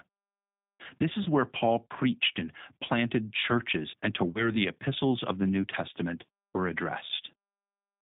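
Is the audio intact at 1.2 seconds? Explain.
No. VoIP packet loss concealed by the speech codec hits at 1.23 s and runs to 1.28 s. About 30 ms of audio went missing, which fits a single lost packet. The decoder filled the gap by repeating its last pitch and vocal-tract settings while turning the gain down, so the speech smears into a brief, fading sound. Because each frame is built from the previous one, the voice stays thin and distorted for tens of milliseconds or more past the gap before it settles.

Underneath that moment, and throughout the clip, is the G.729 codec. It is plainly audible here as rough, slightly synthetic speech confined to a telephone band of roughly 150 Hz to 3.7 kHz, which points to the 8 kbit/s G.729A variant. The codec rebuilds each 10 ms frame from a vocal-tract filter, a pitch predictor and a few pulses rather than the original waveform, which gives the audio its rough, synthetic texture.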